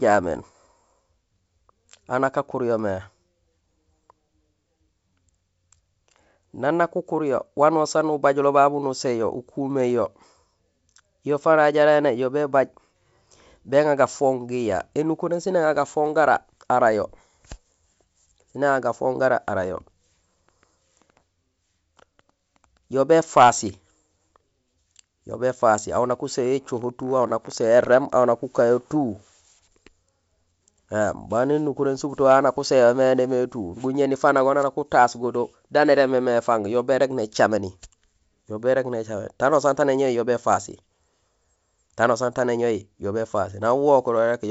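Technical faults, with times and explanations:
No technical faults, so there are no times or explanations to give.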